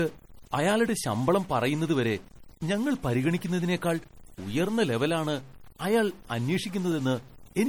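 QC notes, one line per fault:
Throughout: stuck bit. One bit of the sample data was likely held at a fixed value by a faulty data line or converter, so roughly half of all samples land off by that bit's weight, following the shape of the waveform. The speech carries distortion, and because the bit flips with the sign of small values, the quiet gaps between phrases fill with a steady noise floor instead of falling silent.
Throughout: low-bitrate audio saved at a high bitrate. Speech that had already passed through a low-bitrate MP3 encoder, consistent with something around 48 kbit/s, appears to have been encoded again as MP3 at a much higher rate, near 191 kbit/s. The larger file cannot restore what the first pass discarded. The codec artefacts of that first encoding remain in the voice, content stops at 20.1 kHz, and the second encoding adds little of its own.
6.92 s: underrun with held sample. 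The output buffer ran dry and the converter held its last sample value until data resumed, a stall of 1.45 ms, or 64 samples. The waveform flattens, and about a millisecond and a half of live audio is lost. The speech breaks off and resumes almost instantly.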